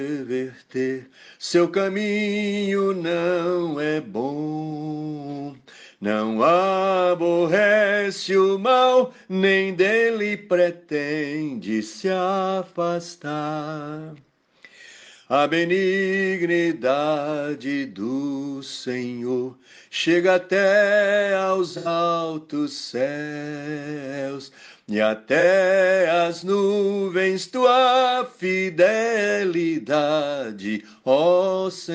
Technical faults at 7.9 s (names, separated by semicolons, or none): none